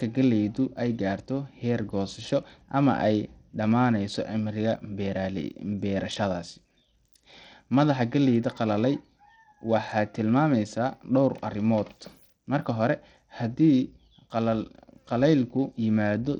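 A speech clip with plainly audible codec damage throughout: the treble flickers in and out, and gritty noise with aliasing rides on the sound. The cause is likely Bluetooth SBC compression, whose fixed sub-band coding, unlike a simple low-pass, starves the top bands unevenly, which fits a low bitrate near 80 kbps.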